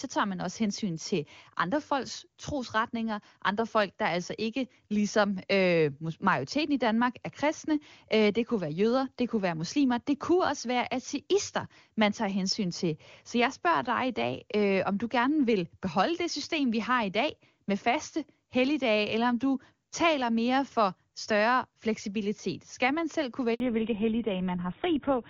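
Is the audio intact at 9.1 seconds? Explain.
Yes, the audio is intact at 9.1 seconds, with no fault at that moment.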